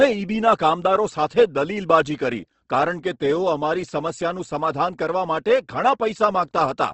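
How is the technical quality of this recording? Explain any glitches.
The technical quality is limited by plainly audible codec damage throughout the speech. The likely cause is Opus compression at a low rate, around 16 kbps. The speech sounds rough and grainy, with a spectrogram showing a hard ceiling near 8.1 kHz and noisy, smeared upper bands.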